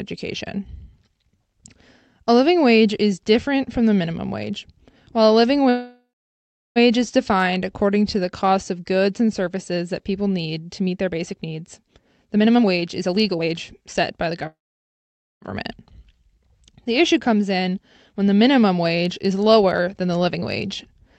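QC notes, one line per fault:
5.69–6.78 s: call audio freeze. The last sound continues as a fading buzz, then about 0.72 s of silence, likely from delayed packets emptying the jitter buffer. Nothing is lost, but a 1.06 s gap is inserted.
12.25–14.46 s: jitter buffer speed-up. The buffer trims repeated pitch-period slices, playing at 124% speed with pitch unchanged. Roughly half a second is removed, so it sounds hurried.
14.47–15.44 s: call audio freeze. A brief fading continuation leads into about 0.87 s of silence as the buffer likely runs dry. Playback resumes where it stopped, adding a 0.95 s gap.
17.50–21.01 s: jitter buffer speed-up. Gentler trimming of pitch periods runs the sound at 106% with pitch unchanged, removing about 0.2 s. It sounds slightly hurried.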